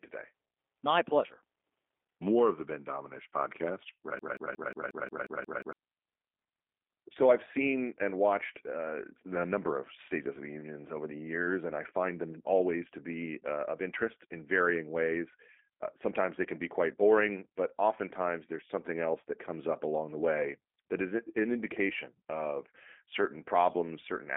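Throughout, the speech sounds rough and faintly synthetic, with nothing above about 3.6 kHz: plainly audible G.729 codec damage, consistent with an 8 kbit/s voice codec rebuilding the speech from a model. From 4.19 to 5.73 s, a 179 ms fragment repeats nine times back to back, a broken-record loop, likely from a stalled stream resending its last buffered piece while the intended audio is lost.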